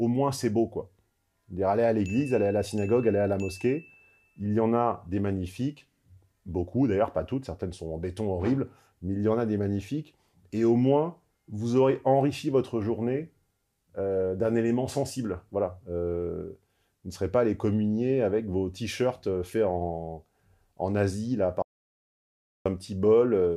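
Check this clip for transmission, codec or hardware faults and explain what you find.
One fault stands out, an audio dropout to silence from 21.62 to 22.66 s. The sound cuts off abruptly and returns mid-flow after about 1.03 s of dead digital silence with no room tone. The likely cause is a brief loss of input, such as a failed link or disconnected device, while recording went on writing silence, so that second of sound is gone.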